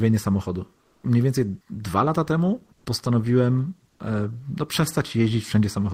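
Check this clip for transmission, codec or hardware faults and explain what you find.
One fault recurs three times: comfort noise in place of the background. At 0.81–1.03 s, 2.75–2.85 s and 3.89–3.99 s, the natural background in the speech pauses becomes a steady, featureless hiss. It is about 3 dB quieter in the first gap, about 8 dB louder in the second, and level in the third. The likely cause is discontinuous transmission of the kind Opus DTX uses: the sender goes quiet during pauses, and the receiver fills them with synthetic noise shaped roughly like the background.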